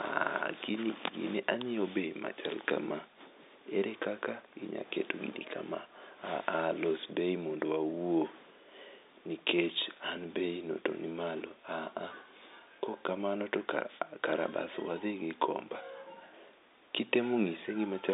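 No technical faults are audible.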